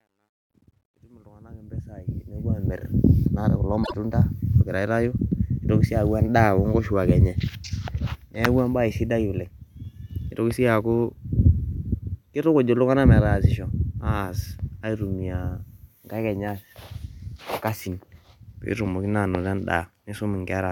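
The clip opens by fading in over its first 2.8 s, and that quiet start sounds gritty and coarse. From 0.0 to about 1.44 s the distortion is at its worst. This is truncation distortion on the fade: the volume ramp kept too few bits and added no dither, so the softest part of the waveform collapsed into a handful of square steps. The graininess points to a stage holding about 12 bits. It clears as the fade reaches full level.

From 3.83 to 3.94 s there is a brief garbled flutter. These are frames out of order: two neighbouring stretches of coded audio were decoded in swapped sequence, so this short span plays back with its halves exchanged. The length suggests two single frames of about 26 ms each trading places. No time is lost, and the audio continues in step afterwards.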